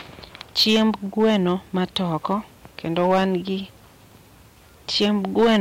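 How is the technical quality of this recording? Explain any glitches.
Hard clipping damages the speech in four places: 0.59 to 0.83 s, 1.20 to 2.34 s, 2.97 to 3.23 s, and 4.96 to 5.58 s. The level overshoots what the stage can pass by about 6 dB, and about 7 dB at the end. Peaks are sliced flat, adding high harmonics heard as harsh, crackling fuzz.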